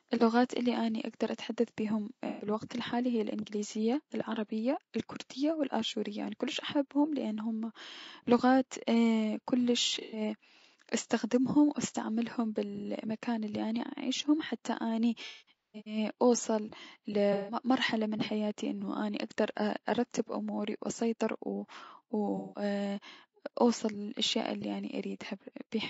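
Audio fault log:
throughout: low-delay AAC compression. The speech sounds rough and grainy, with a noisy haze between the harmonics and a thin, somewhat synthetic top band. This is likely low-delay AAC of the AAC-ELD kind at around 32 kbps. Its short frames resolve pitch harmonics poorly and use up bits, so at this rate the coder cannot keep the spaces between harmonics clean or carry the highs faithfully.
2.27–2.47 s, 9.89–10.21 s, 15.26–15.97 s, 17.33–17.58 s, 22.37–22.63 s: AAC frame loss with concealment. Each patch is smeared, noisy or phasey rather than silent. The first comes after "اتحدث بيهم" and covers about 120 ms of missing audio. The third follows "اني عايشة حتى اني", is the longest at about 450 ms scattered over 600 ms, and has a longest run of about 200 ms. The fourth ends just before "من حياتي انو اني". The others are about 150 ms each. The decoder rebuilt the lost frames from the last good spectrum, which gives the smeared, noisy sound.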